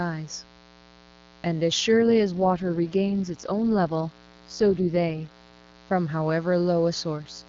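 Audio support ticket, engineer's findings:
Mains buzz, steady, whole clip. Raspy 60 Hz buzz with harmonics well up into the kilohertz range, sitting roughly 30 dB under the speech. Probable component: dimmer, rectifier or unshielded cable. Mechanism: sharp switching spikes twice per mains cycle couple into the line. That spreads energy across many harmonics of 60 Hz, not a clean hum.

AMR rate drop, 1.92 to 5.76 s, again 7.16 to 7.48 s. Speech turns rough, buzzy and synthetic. Band unchanged, no gap. Sound points to a fall from 23.85 kbit/s to the lowest wideband mode, around 6.6 kbit/s. Probable component: radio link, network-commanded rate adaptation. Mechanism: bits move to error protection, so the vocal tract model gets coarser. Clarity returns when the rate recovers.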